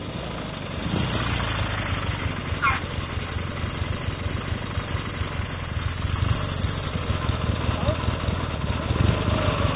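No technical faults can be heard in this audio, which carries the band limit of a telephone-grade call path, with nothing above 4 kHz, consistent with G.711 mu-law at 64 kbps.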